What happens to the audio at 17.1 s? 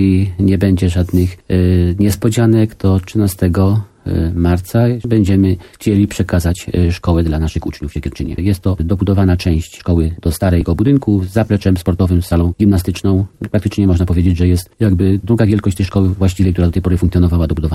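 At 17.1 s the audio is still inside a time-stretched section running from 6.33 s to the end: software likely sped it up about 1.36 times while holding pitch by dropping short pieces, so it sounds rushed.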